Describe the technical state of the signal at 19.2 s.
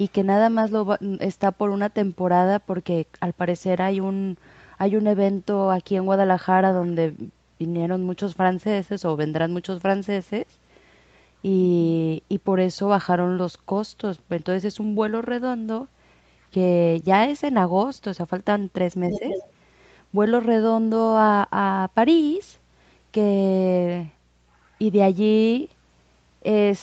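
At 19.2 s the speech is suppressed in double talk: from 19.11 to 19.24 s the level dips by about 5 dB, likely because the echo canceller mistook overlapping speech for echo. From 19.11 to 19.51 s the other side's voice leaks through about 10 dB below the talker, likely echo the canceller left unremoved.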